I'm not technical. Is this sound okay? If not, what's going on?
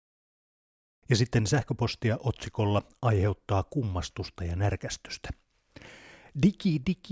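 Yes, nothing stood out as a problem when listening to this speech recording.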